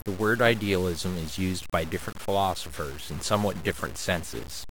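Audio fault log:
Throughout: low bit depth without dither. The speech is grainy, and the grit rises and falls with it. Quiet tails sputter or cut to silence. This likely comes from truncation without dither, and fits about 6 bits, leaving error around 15 dB below the signal.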